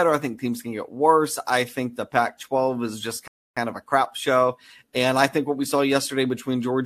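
At 3.28 s, right after "is just", the speech drops abruptly into silence and stays silent until 3.57 s, when it picks up with "of a crap show" exactly where it stopped. This is a rebuffering stall: playback ran out of downloaded audio and halted until more data arrived. Nothing is skipped or repeated, but the pause adds about 0.29 s to the running time.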